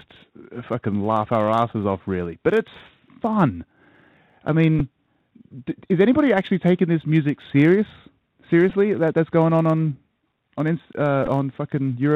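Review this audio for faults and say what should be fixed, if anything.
The whole clip carries the sound of the Bluetooth CVSD headset codec. Nothing reaches above 4 kHz, so the speech sounds narrow and telephone-like. The codec sends one bit per sample to say up or down, with an adapting step. Sharp high sounds outrun that step. The damage is plainly audible: scratchy s sounds and a grainy hiss under the speech, which fits a 64 kbps CVSD link. Prevent it by using a wideband headset profile such as mSBC or LC3.

A block size mismatch (truncated) runs throughout. A steady buzz sits near 92 Hz. One stage writes blocks slightly longer than the next stage reads, and the tail of each block is dropped. Each cut repeats at the block rate and produces the buzz. The two sizes are nearly equal, so the speech keeps essentially its normal speed and pitch. Prevent it by matching the block sizes or adding a resampling buffer between the stages.

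Bluetooth headset packet repeated occurs three times. The first is from 4.79 to 4.82 s. The second is at 8.70 s, just before "that that's going on". The third is from 11.26 to 11.28 s. In each case voice packets were lost, and the chip decoded the last good packet again. Each repeat lasts 3.75 ms. That gives a brief buzzy burst near 267 Hz, about 11 ms long at the first and third points and shorter at the second. Prevent it with a stronger radio link or packet-loss concealment.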